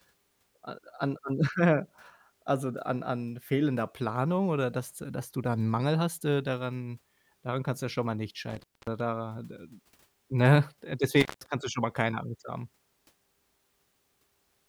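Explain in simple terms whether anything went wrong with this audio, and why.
Intermittent contact breaks this speech twice, near 8.50 s and 11.20 s. A loose connection briefly opens, so the sound drops out for about 0.24 s, then 0.16 s, with crackles at each edge.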